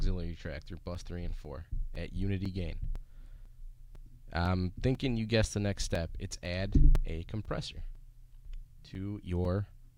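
From 0.95 s to 9.45 s, periodic USB or driver dropouts occur every 0.5 s: something stalls the audio path at a fixed interval, and each time a few milliseconds of signal are replaced by silence. They are heard as evenly spaced ticks over the sound.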